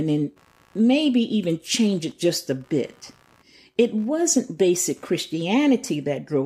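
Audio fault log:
throughout computer activity noise: faint buzz pulsing around 70 times a second, roughly 40 dB under the speech, from computer load disturbing the shared audio ground; spectrogram shows regular vertical striations.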